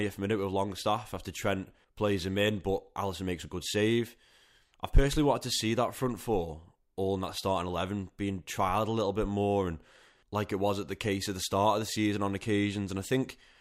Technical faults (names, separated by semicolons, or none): none